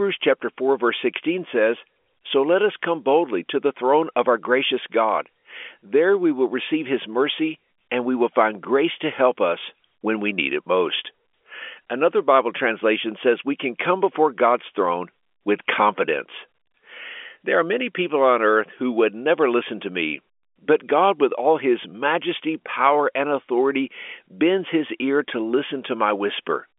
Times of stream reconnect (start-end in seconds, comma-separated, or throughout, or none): none